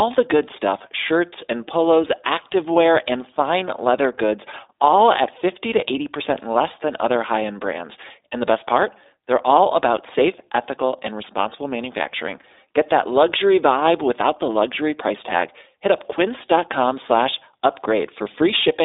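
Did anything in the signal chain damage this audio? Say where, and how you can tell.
Yes, at the codec stage: iLBC coding throughout, band-limited to 300 Hz to 3.7 kHz with nothing above 3.8 kHz, and a plainly rough, synthetic texture from independently coded 20 ms frames, consistent with the 15.2 kbps mode.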